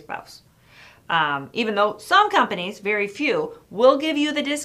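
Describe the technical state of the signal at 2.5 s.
At 2.5 s the signal is intact, with no audible fault at that moment.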